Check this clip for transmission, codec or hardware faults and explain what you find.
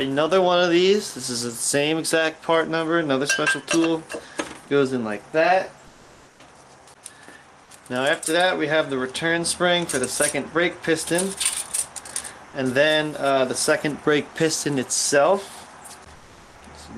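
One fault appears near the end. From 16.15 to 16.51 s, about 360 ms, comfort noise replaces the background. The real background, about 27 dB below the loudest passages, gives way to steady, featureless hiss about 2 dB quieter. This is likely discontinuous transmission, such as Opus DTX, with the receiver synthesising filler. On a spectrogram the textured floor turns into a smooth, uniform band; the waveform shows an evenly flat noise stretch.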